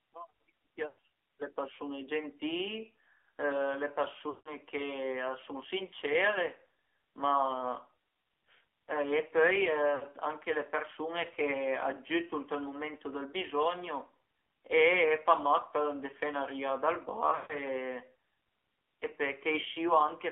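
Throughout the speech the AMR narrowband mobile codec is plainly audible. The band runs only from about 250 Hz to 3.5 kHz, and the voice has a buzzy, synthetic edge. That points to a low AMR-NB mode, around 7.4 kbps, where a few pulses per subframe drive a vocal tract model. A simple band-limited line would sound dull but natural, without this buzz.

At 0.88 to 1.05 s, lost AMR speech frames break the voice. The loss is scattered over 160 ms, and its longest run is 100 ms. The decoder repeats the last good pitch and vocal tract settings at falling gain, so the sound stretches into a smeared tone and fades rather than cutting off. At 4.30 to 4.49 s, a 160 ms run stretches and fades toward silence in the same way. At 9.96 to 10.04 s, a brief 60 ms loss gives only a short warbling dip. At 17.30 to 17.54 s, the losses spread over 200 ms with a 140 ms run, so the voice drags, fades, and returns rough. 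A plain packet dropout would instead leave an abrupt hole or click.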